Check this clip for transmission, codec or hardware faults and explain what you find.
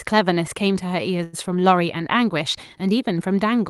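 One transmission fault appears in the speech, carried over a call path whose top end stops near 12 kHz, which fits Opus at a moderate bitrate.

From 1.23 to 1.35 s there is a short stall from a late packet. The jitter buffer ran dry, so the receiver stretched the last sound for about 96 ms before resuming where it left off, with nothing lost but everything after it arriving 96 ms later. On a spectrogram the harmonics run flat and smeared across that span, and the waveform repeats a steady, slightly dipping cycle.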